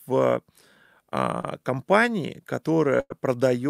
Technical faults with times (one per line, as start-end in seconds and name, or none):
1.41-1.45 short concealed packet loss
3.00-3.12 burst of packet loss